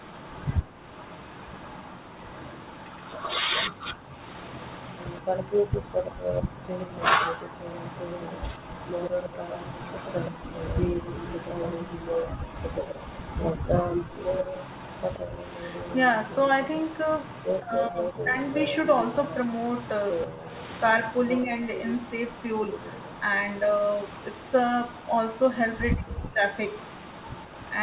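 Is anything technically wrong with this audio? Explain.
Yes. Three kinds of fault affect this speech recording, which is band-limited to 4 kHz as on a narrowband phone line.

Echo leak, 0.0 to 27.78 s: The far end's echo canceller likely failed to fully remove what its loudspeaker fed back into its microphone, so the residue was sent back. This produces a faint delayed copy of the speech, trailing it by 126 ms and sitting around 15 dB below it. It runs through the whole clip as a slapback-like shadow behind the speech.

Background gated by the echo canceller, 0.62 to 6.66 s and 10.31 to 12.46 s: While the loudspeaker played, the canceller clamped the microphone down hard, cutting the room sound by as much as about 40 dB. The background briefly vanishes and then snaps back. The dips add up to roughly a second in the first stretch and about half a second in the second, giving a pumping, on-off ambience.

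Speech suppressed in double talk, 3.76 to 7.56 s, 13.57 to 21.52 s and 25.95 to 26.42 s: When both sides talked at once, the canceller couldn't tell the local talker from the loudspeaker echo and turned both down. The likely result is speech that dips or drops out in pieces. In the first two stretches the drops reach around 40 dB, with the longest adding up to roughly two seconds. The last is shallower, around 25 dB, over about half a second.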